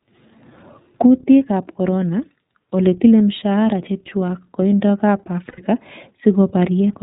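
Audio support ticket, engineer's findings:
Narrowband VoIP coding throughout under the iLBC codec. Nothing above 4 kHz, speech clear but rough, slightly synthetic. The 13.33 kbps grain points to the 30 ms frame mode. Unlike plain G.711 narrowband, the roughness comes from excitation coding, not just bandwidth.

Electrical switching spike at 3.72 s, just before "chechwak kandoik ab". A sharp snap sits on top of the speech, which carries on underneath. Likely a nearby switch or static arc coupling into the line. Unlike a codec glitch, nothing is replaced or held.

Lost iLBC frames, 5.48 to 5.60 s, right after "chechwak kandoik ab". A held, buzzy, breathy vowel fills the gap, consistent with three 30 ms frames concealed by pitch-cycle repetition plus noise. Clean recovery on the next frame, unlike silent dropouts or smeared recovery in codecs that depend on the previous frame.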